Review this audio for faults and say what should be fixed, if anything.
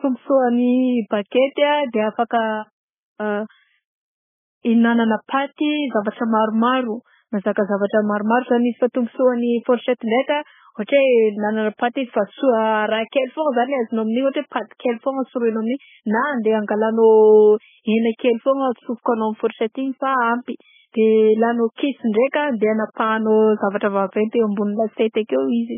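MP3 compression, throughout the clip: the speech has nothing above 3.5 kHz, and the remaining band sounds watery and swirly, with weak detail flickering in and out from frame to frame. This points to very heavy compression at an extremely low bitrate, roughly 10 kbps, and is likely an MP3 encode. With so few bits, the encoder discarded the treble outright and zeroed the quieter frequency lines. Encoding at a much higher bitrate, or keeping the uncompressed original, would prevent this.

Pre-echo at 7.87 to 7.90 s (32 ms), at 10.87 s (18 ms), and at 14.29 to 14.34 s (50 ms): a brief hiss runs ahead of each sharp onset, so those attacks sound softened and smeared. The first falls between "zavatra maromaro mazaka" and "maromaro zany izy fa". Each attack sits late in a transform block, and the quantisation noise sized for the loud onset spreads back into the quiet stretch before it. A higher bitrate, or an encoder that switches to short blocks on transients, would prevent it.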